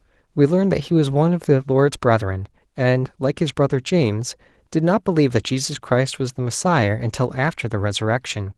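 Speech carried over a WebRTC call path, its top end rolled off near 12 kHz in a way consistent with Opus at around 20 kbps, with no faults found.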